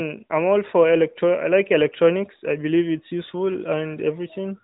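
No technical faults can be heard in this speech recording. It has passed through the AMR narrowband mobile codec, so nothing above 4 kHz comes through, and the light coding texture fits the codec's top 12.2 kbps mode.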